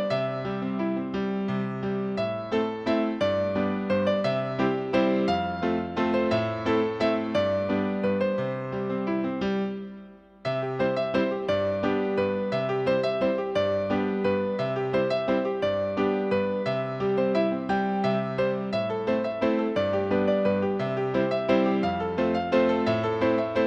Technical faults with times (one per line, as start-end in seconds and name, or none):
none